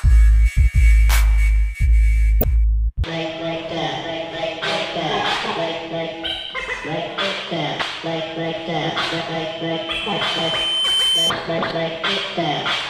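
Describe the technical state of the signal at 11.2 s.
At 11.2 s you're right at the tail of a loudspeaker feedback squeal that runs from about 9.49 to 11.33 s. A mic is picking up the speaker it's feeding, and around 3.1 kHz the loop gain tips past one, so that tone feeds on itself. It swells over roughly a second and a half into a squeal that ends up about as loud as the rest of the audio, then cuts off just after 11.3 s.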